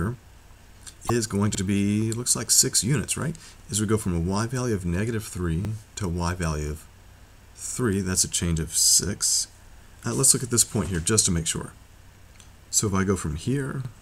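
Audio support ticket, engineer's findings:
Short glitch-and-skip at 1.06–1.10 s, a brief glitch again at 2.52 s; sound jumps forward each time. Likely a broken MP3 bit reservoir: frames around 26.1 ms cut out, following frame reaches back for borrowed bits and decodes another frame's bytes instead.

Repeating stutter/click at 1.55, 3.60, 5.65, 7.70, 9.75, 11.80 and 13.85 s, regular spacing of about 2 s. Overlapping chunks in the processing or transport stage: each roughly 2 s chunk begins 50 ms before the previous one ended, so that 50 ms plays twice at every join.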